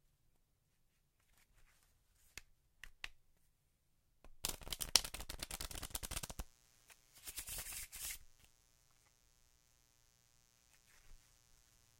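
At 5.54 s a mains buzz kicks in and runs to the end: 60 Hz harmonics from switching spikes leaking in, a steady raspy buzz sitting low under the sound.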